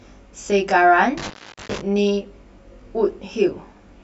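A speech recording with a comb-filtering problem from channel delay the whole way through: one side lags the other by roughly 20 ms, so summing to mono carves evenly spaced notches from about 30 Hz up, leaving it sounding rough or slightly doubled. Between 1.18 and 1.79 s there's an intermittent contact, a loose plug or cable briefly opening, so the signal drops out for about 0.42 s with crackle at the edges and faint hiss in the gap.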